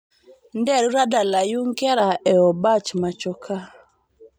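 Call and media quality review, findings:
Pre-emphasis left on, 0 to 2.0 s: speech thin, bright, hissy on sibilants. J.17 treble lift never de-emphasised, about 11 dB hot at 10 kHz.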